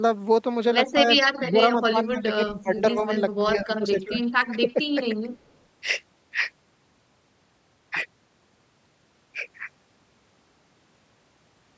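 Between 0.94 and 5.28 s the speech repeatedly dips or breaks up, at 0.94–0.99, 1.38–1.59, 1.9–3.11, 3.38–4.19 and 4.54–5.28 s, falling by roughly 10 to 20 dB. This is likely speech suppressed in double talk: the echo canceller ducks the near talker along with the echo while the far side speaks.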